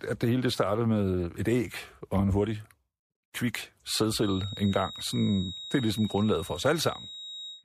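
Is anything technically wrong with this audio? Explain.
Yes. From 4.13 s to the end, a feedback whistle appears. A thin, single-pitch 3.8 kHz tone sits about 15 dB under the speech and slowly swells and fades. The likely cause is a speaker-to-microphone loop hovering at the edge of feedback.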